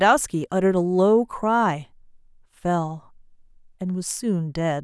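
No technical faults can be heard in the speech recording.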